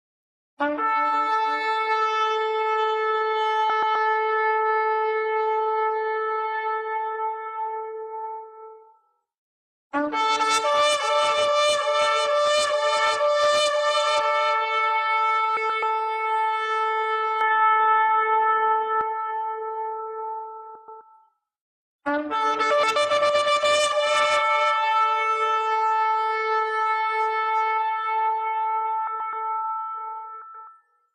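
Frames out of order first appear at 3.70 and 15.57 s. Each time, two neighbouring 128 ms blocks play swapped. The result is a brief garbled flutter.

From 17.41 to 19.01 s, the sound turns dull and boxy, with nothing above 3.8 kHz. The level shifts by a few decibels, and a faint new background noise appears. There is no gap at the change. The input likely switched to a poorer device.

The same frame swap recurs at 20.75, 22.71, 29.07 and 30.42 s.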